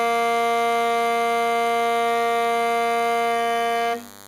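From start to finish, a DECT cordless phone buzz sits under the music, roughly 20 dB below it. A nearby DECT handset or base station fires a radio burst every 10 ms, and the audio circuitry rectifies that burst into the signal, giving a thin, rasping 100 Hz buzz rich in harmonics. Mains hum is smoother and more tonal, centred on 50 or 60 Hz. This buzz is pulsed and edgy, with the harmonics making it sound brittle rather than a low drone.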